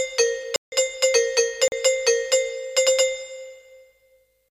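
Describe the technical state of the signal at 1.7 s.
At 1.68 to 1.72 s a 40 ms block of digital silence replaces the samples, likely from an unfilled output buffer; the sound cuts out and back with no fade, leaving a short hole, unlike a faded dropout.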